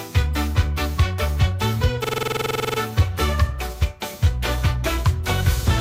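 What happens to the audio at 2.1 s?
A rapid machine-gun stutter, one 46 ms fragment repeating 16 times at 21.5 per second, runs from 2.04 to 2.79 s. This is a system hang loop: the system froze while the audio hardware kept replaying one ring buffer, which fits a 2048-sample buffer.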